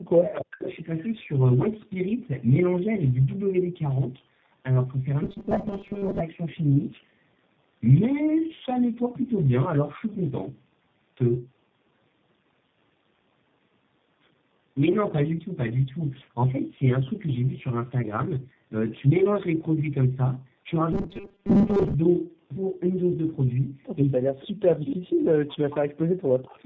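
Throughout, the speech sounds rough, muffled and warbly. This is tandem speech coding: the audio was decoded and re-encoded at each link, which points to a G.723.1, G.711 and G.729A chain, each coder compounding the last one's damage.

From 0.00 to 0.68 s, the speech drops away by roughly 40 dB and cuts out. This is likely speech suppressed in double talk, where the echo canceller turned this talker down while both sides spoke.

From 5.23 to 6.20 s, the sound turns into a rigid metallic buzz at 200 Hz, with around half of it repeated. This is likely robotic sound from repeated short buffers: the last 5 ms was looped while real audio was skipped.

From 20.93 to 21.95 s, the same 200 Hz robotic buzz returns more heavily, with most of the audio repeated. Again this is likely late buffers being filled with looped 5 ms segments.

From 24.19 to 25.50 s, the speech again dips and breaks up, by roughly 40 dB. 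This is likely speech suppressed in double talk, as simultaneous talk makes the canceller duck the talker.

From 24.90 to 24.96 s, within that dip, a brief faint copy of the voice appears about 20 dB down and delayed by 306 ms. This is likely echo leak, where loudspeaker echo slipped past the far end's canceller and was sent back.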